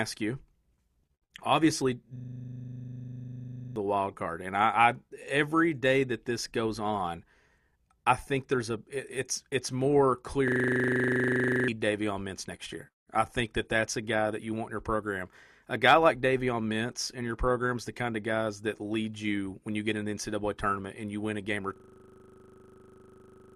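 A system hang loop interrupts the speech at 2.16 to 3.76 s, 10.48 to 11.68 s, and 21.76 s to the end. Each time the hardware keeps cycling one 40 ms slice, giving a steady 25 Hz buzz, and roughly 1.5, 1 and 2 seconds of audio go missing.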